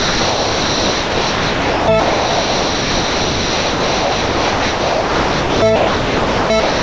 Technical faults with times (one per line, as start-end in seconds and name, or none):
0.00-6.82 sound dropped by the voice detector